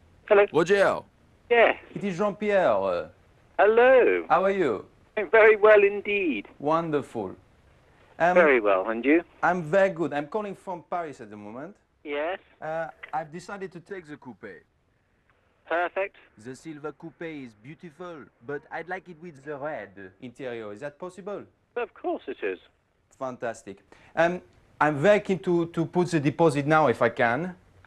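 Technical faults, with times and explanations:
9.57–10.69 s and 23.53–24.26 s, zipper noise: the gain moves in unsmoothed 1 dB jumps, about ten a second on a fall of around 10 dB, then about fifteen a second on a similar rise. Each jump leaves a small click, heard as a ticking zipper riding on the fade.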